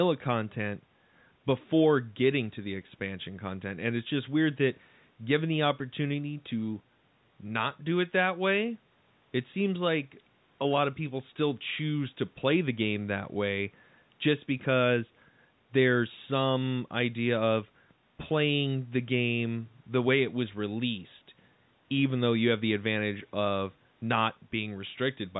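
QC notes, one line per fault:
No faults to note.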